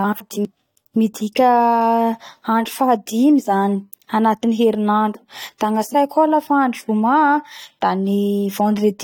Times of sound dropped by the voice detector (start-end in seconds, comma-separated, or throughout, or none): none